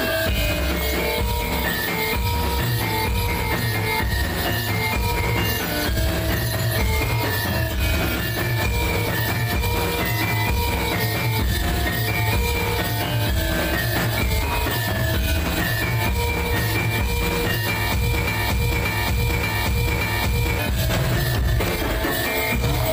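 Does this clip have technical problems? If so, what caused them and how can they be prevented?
Yes. From 18.27 to 20.59 s, a 0.58 s fragment repeats exactly four times. This broken-record loop is likely a stalled stream resending its last buffer, so the intended audio was lost. Prevent it by detecting stalls and muting or skipping rather than replaying stale data.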